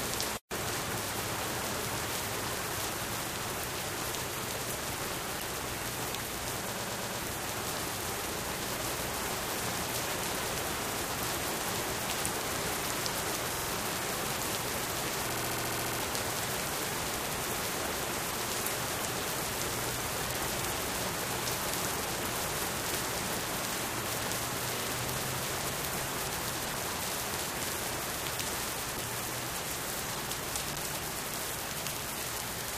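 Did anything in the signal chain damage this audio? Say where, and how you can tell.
Yes. The audio stutters at 6.71–7.18 s, 10.85–10.99 s, 13.54–13.68 s and 15.30–16.0 s, replaying blocks of 46 to 116 ms. These are repeated frames from the codec or storage stage: compressed frames were written more than once, so playback runs longer.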